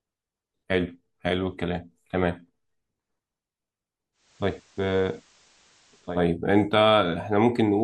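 At 4.12 s the speech shows digital radio blending to analogue: the receiver loses its digital stream and cross-fades over about a quarter second to the FM copy. Level dips about 2 dB, faint hiss creeps in, and it swings back at 6.22 s.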